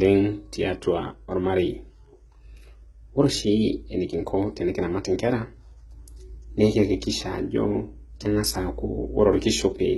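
HE-AAC compression runs throughout the speech, with heavy damage. Only the lower spectrum seems truly coded. The treble is likely rebuilt by copying lower bands upward, so harmonics misalign across the crossover and s sounds turn gritty and metallic. Nothing sounds above 11.8 kHz, which fits a low bitrate around 16 kbps.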